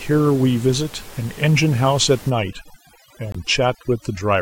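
From 2.30 s to the end, overdone noise removal sets in. A noise reduction stage pushed too hard is switching individual frequency bands down or off whenever they sit close to its noise estimate, so the room noise, which had been about 21 dB below the speech, collapses to near silence sprinkled with twinkling specks, and the quieter parts of the speech are carved away. What separates this from a low-bitrate codec is that the damage follows the noise floor: the background is what vanishes first.

Inside that stretch, at 3.32 s, a corrupt frame was muted. The sound stops abruptly and a hole of about 40 ms follows, ending at 3.36 s, which fits two compressed frames rejected by the decoder and replaced with silence. Unlike packet loss concealment, nothing is smeared or repeated to fill the gap, and the speech resumes on time, so the timing is kept.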